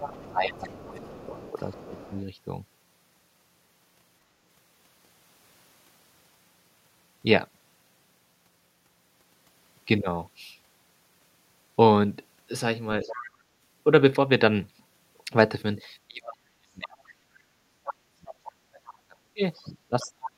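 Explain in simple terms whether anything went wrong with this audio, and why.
Other side's voice leaking through: at 0.0 to 2.2 s, 13.03 to 13.3 s, 18.28 to 18.34 s, 18.9 to 18.94 s and 19.54 to 20.29 s, a faint second voice sits behind the talker. The likely cause is the far party playing from a loudspeaker and the echo canceller failing to scrub it from the microphone.

Speech suppressed in double talk: from 0.24 to 2.2 s and from 16.07 s to the end, the talker's voice sinks and drops away in pieces. The later stretch is much deeper, nearly vanishing. Both sides were likely speaking together, so the echo canceller turned everything down.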